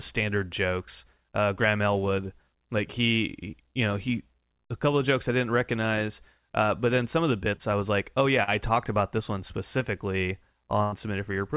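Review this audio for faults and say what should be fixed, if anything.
Short concealed packet loss at 7.56–7.62 s, after "then some of the", and 8.43–8.50 s, after "I was like oh": about 40 ms went missing each time and was patched by extending the last sound, so it is heard as a brief smear rather than a silent gap.

Burst of packet loss at 10.83–10.95 s, after "about this one specifically": about 80 ms is gone. The receiver fills it with a held continuation that fades out, so it runs audibly longer than the two smears above, and the audio resumes further on with that stretch skipped.

Enabling forward error correction on the narrowband call link, where nothing is heard above 4 kHz, together with a deeper jitter buffer would let these lost packets be recovered or arrive in time instead of being concealed.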